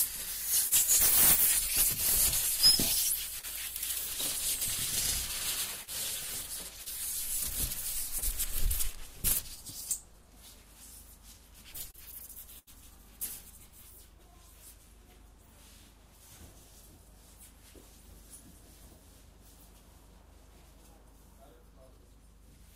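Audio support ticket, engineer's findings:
Short concealed packet loss at 0.67, 3.39, 5.83, 6.83 and 8.18 s. Each is a brief smear or wobble in the sound, about 40 ms of audio not reaching the decoder in time. The jitter buffer or decoder concealment bridged each hole by extending the preceding sound, then crossfaded back to real audio. Network-side loss, receiver concealment working as designed.

Doubled audio track, 4.62 to 6.41 s. A second full-band copy at roughly equal level trails the original by roughly a tenth of a second. It is dry, with no decay or room colouring, and begins and ends abruptly at the span edges. The likely cause is a duplicate capture path or a mixer routing that feeds the same source twice with different latencies. This overlaps the 5.83 s loss.

Repeated packet loss (robotic sound), 11.91 to 12.70 s. The sound is choppy, with pieces missing. There are three gaps in the span, the longest about 79 ms, with around 120 ms missing in total. 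Concealment patches each gap by continuing the last sound, and the next gap follows before playback recovers. About 14% of the span is synthesized fill. This points to a burst of network loss or late arrival.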